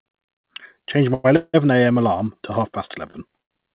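At 1.14 to 1.26 s and again at 1.36 to 1.56 s the sound is held as a fading buzz, the second trailing into about 30 ms of silence, so it resumes about 100 ms and then about 175 ms later. That's likely a call audio freeze, with packets held up and the jitter buffer running dry. After "alarm to half past", short stalls from a late packet stretch the last sound at 3.10 to 3.16 s and 3.42 to 3.53 s. The narrowband sound, with nothing above 4 kHz, fits G.711 mu-law at 64 kbps.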